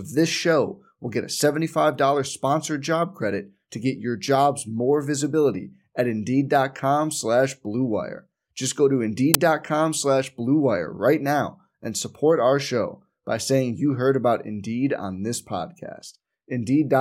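File tags played as audio at 9.34 s, right after "go to": a tiny slice of the file's embedded cover picture was read by the decoder as if it were sound samples. Because that picture is compressed data, its bytes look random, so they come out as very loud white noise. It is heard as a very brief, loud crack of static that starts and stops abruptly, with hard edges.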